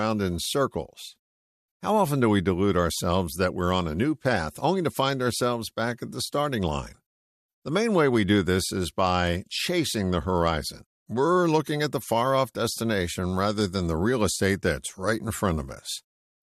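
Listening to this speech recording, nothing stood out as a technical problem at any point.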